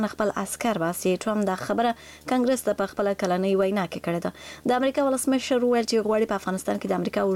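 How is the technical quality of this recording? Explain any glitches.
The recording has one real problem: a video or display buzz running the whole way through. A screen or video cable is leaking into the audio path, so you hear a steady 75 Hz buzz at the display's field rate, with gritty hash riding above it, sitting roughly 30 dB under the wanted sound.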